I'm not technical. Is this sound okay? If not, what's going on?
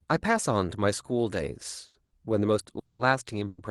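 No. In two places a piece of the call's data arrived late, and twice more the flow of sound was likely held up on its way to you.

Short stall from a late packet, at 1.85 to 1.96 s and 2.04 to 2.12 s: a small chunk of the speech didn't arrive on time, so the receiving end had nothing ready to play. It stretched the last bit of sound for about 90 ms and then 60 ms until the chunk showed up. You hear a sound held slightly too long, with a faint buzz or dip, but nothing is lost.

Call audio freeze, at 2.79 to 3.01 s and 3.47 to 3.60 s: the speech stops moving and the last sound carries on as a fading buzz or hiss, ending in a brief silence (about 30 ms in the first freeze, 20 ms in the second). This is likely caused by a run of data being delayed in transit. When it arrives, the speech resumes exactly where it stopped, so a pause of about 200 ms, then about 110 ms, has been added.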